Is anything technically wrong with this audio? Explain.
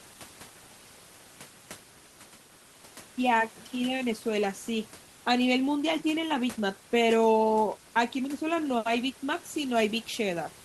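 No, nothing is technically wrong with this audio.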